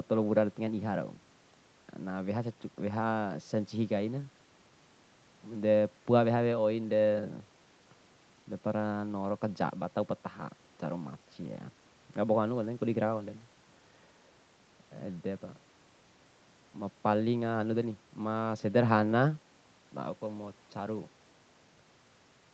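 No technical faults occur in the speech to describe in time order; the top end stopping around 8 kHz is just the normal bandwidth of the Opus call path.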